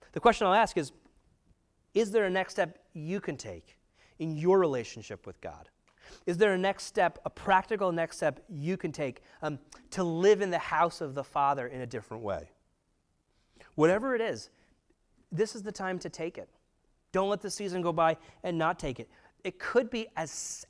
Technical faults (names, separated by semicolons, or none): wrong sample rate